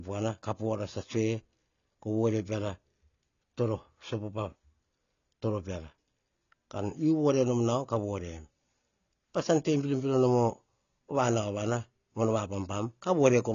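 AAC compression runs throughout this speech: nothing reaches above 7 kHz, and the audible dullness and smearing likely come from AAC-LC coding at a bitrate around 24 kbps.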